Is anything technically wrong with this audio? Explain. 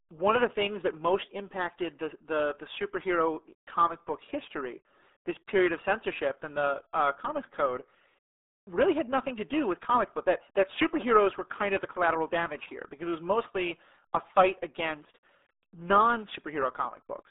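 Yes, the whole clip is squeezed through a RealAudio 14.4 codec. The speech sits in a narrow band of about 250 Hz to 3.7 kHz with nothing above 3.8 kHz, and the heavy, gargly smearing fits a dial-up-era bitrate around 8 kbit/s, so everything sounds muffled and watery.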